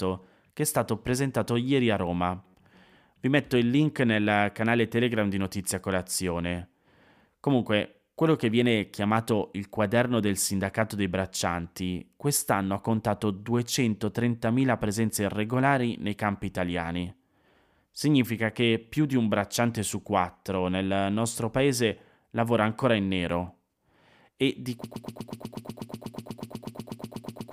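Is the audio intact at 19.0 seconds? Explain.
Yes, at 19.0 seconds the speech plays through cleanly, with no dropout, click, distortion or other fault at that moment.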